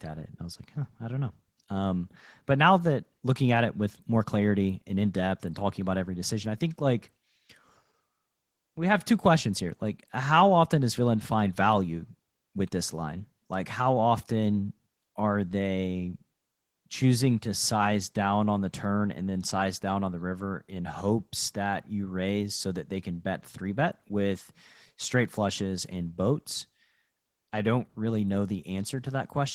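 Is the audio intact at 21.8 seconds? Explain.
No. Opus voice compression runs throughout the clip, including 21.8 s. At a rate that sounds like about 16 kbps, the low band is coded as linear prediction and the top is coded coarsely, leaving the speech muffled and hoarse, with a patchy, smeared upper spectrogram.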